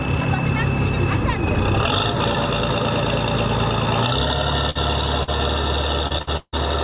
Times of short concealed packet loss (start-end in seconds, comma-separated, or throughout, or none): 5.23-5.29